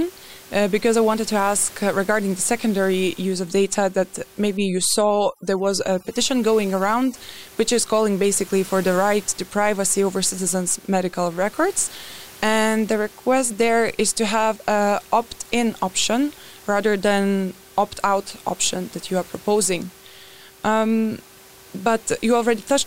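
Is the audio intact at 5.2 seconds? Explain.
No. Overdone noise removal runs from 4.57 to 7.15 s, just before "which is calling basically". Bands near the noise floor get gated away, so the background drops and breaks up into twinkling specks.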